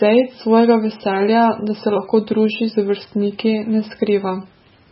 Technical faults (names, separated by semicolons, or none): MP3 compression